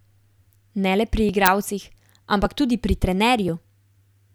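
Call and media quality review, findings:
Small skips in the speech at 1.29, 2.46 and 3.48 s. A few milliseconds jump ahead each time. Likely a dropped buffer (overrun) in capture.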